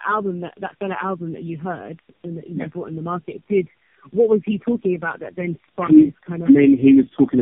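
It's speech with tandem speech coding throughout: rough, muffled and warbly, with nothing above 3.4 kHz, which fits repeated low-rate AMR-NB passes stacked on each other.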